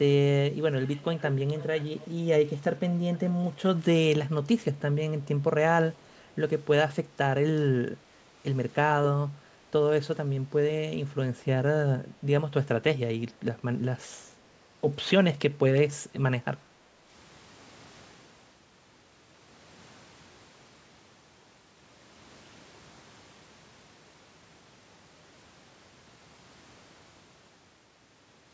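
Echo leak at 0.86 to 1.36 s, 1.57 to 2.07 s and 3.15 s: a faint copy of the speech returns about 470 ms late, likely a far-end loudspeaker echo the canceller missed.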